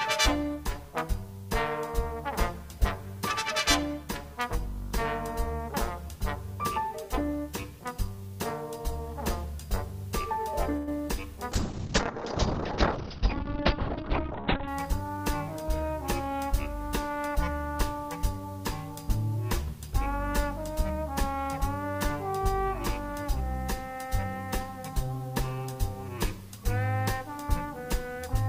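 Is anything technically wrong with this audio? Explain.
Yes, there are three faults, all within about five seconds.

A call audio freeze runs from 10.76 to 10.88 s. The sound stretches into a brief fading buzz for about 110 ms, then resumes where it left off with nothing lost. This points to packets likely held up in transit, draining the jitter buffer until they arrived.

A call bitrate drop runs from 11.52 to 14.73 s. A falling bandwidth estimate pushed the encoder from 128 kbps down to 8 kbps and narrowed the audio band from 20 kHz to 4 kHz. The result is coarse, muffled and watery for over three seconds.

A jitter buffer speed-up runs from 13.97 to 15.72 s. The receiver held surplus audio and trimmed short pitch-period slices repeatedly, about a tenth of a second in total. The sound plays roughly 5% fast at unchanged pitch and feels slightly hurried.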